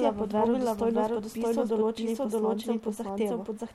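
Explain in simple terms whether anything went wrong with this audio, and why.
The speech is heard twice throughout, as a doubled audio track: a second, equally loud copy trails the first by about 0.7 seconds, with no echo tail or room sound. The likely cause is the signal being recorded again through a slower path.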